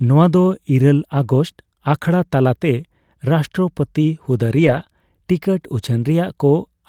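Lost packet rebuilt from error correction, around 4.57 to 4.79 s in this speech clip: the next packets carried low-bitrate copies, so no gap, but about 120 ms sounds rougher and noisier.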